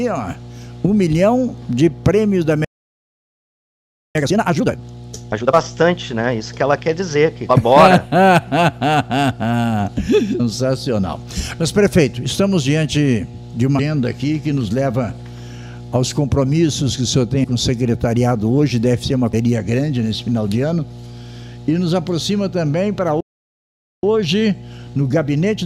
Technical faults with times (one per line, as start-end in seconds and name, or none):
0.00-25.66 mains hum
2.65-4.15 playback stall
4.15-5.55 time-compressed catch-up
5.31 compressed frames skipped
7.49 compressed frames skipped
10.39 compressed frames skipped
13.78 compressed frames skipped
17.43 compressed frames skipped
19.33 compressed frames skipped
23.20-24.03 playback stall
24.03-25.66 time-compressed catch-up